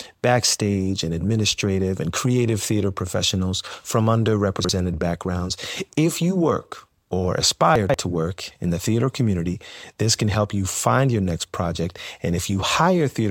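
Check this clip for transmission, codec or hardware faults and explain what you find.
Two brief jumbled moments are audible, both caused by chunks out of order. At 4.60 to 4.69 s, just after "creative theater professionals from", the sound jumbles briefly; at 7.76 to 7.94 s, between "you work or" and "to work in the", a longer garbled scramble occurs. Audio blocks about 46 ms long were delivered late and played after their successors, displaced by one chunk first and three chunks second. Nothing is missing, but each reordering leaves hard joins.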